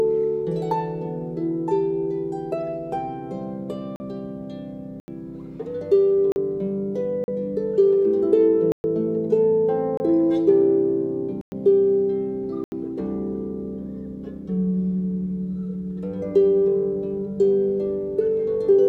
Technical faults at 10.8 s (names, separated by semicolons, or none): none